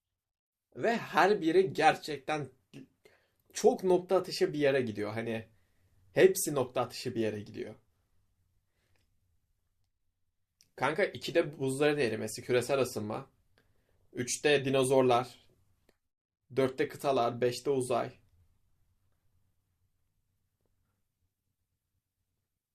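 Listening through the recording, nothing stood out as a technical problem at any point.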